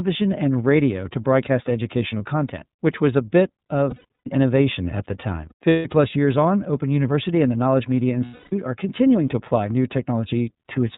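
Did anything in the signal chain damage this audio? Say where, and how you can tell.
Yes. The iLBC codec, at the codec stage, affects the whole clip: the speech stops sharply at 4 kHz and sounds clearly rough and synthetic. That fits iLBC's 13.33 kbps mode, where each 30 ms frame's excitation is coded independently of the one before.

Lost iLBC frames at the network stage occur at 3.90–4.28 s, 5.49–5.86 s and 8.25–8.53 s. Each gap becomes a held, buzzy vowel as the decoder repeats the last pitch cycle mixed with noise. The first two gaps are scattered losses, with the longest runs around 100 ms and 150 ms respectively.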